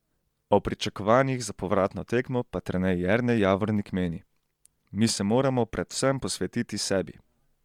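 From start to finish the speech carries a breathy, grainy edge and thinned-out highs, consistent with Bluetooth LC3 compression, likely at a setting around 48 kbps with 10 ms frames, where the codec discards upper-spectrum detail and substitutes shaped noise in its place.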